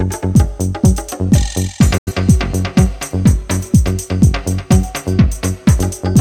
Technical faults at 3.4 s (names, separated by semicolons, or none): none